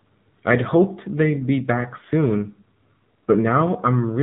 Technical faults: AMR narrowband mobile codec

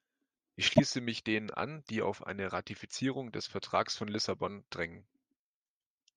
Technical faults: corrupt frame decoded

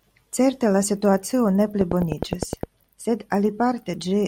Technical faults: train of clicks

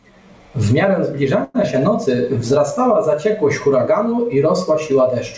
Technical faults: call audio freeze; short concealed packet loss; jitter buffer slow-down

